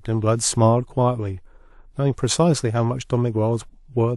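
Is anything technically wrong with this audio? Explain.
No, nothing technically wrong stood out on listening to this speech clip.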